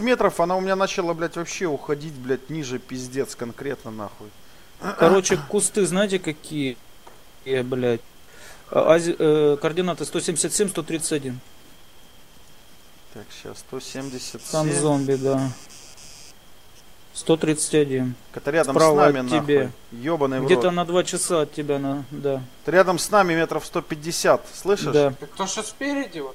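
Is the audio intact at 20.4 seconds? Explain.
Yes, the audio is intact at 20.4 seconds, with no dropout, glitch or other technical fault at that moment.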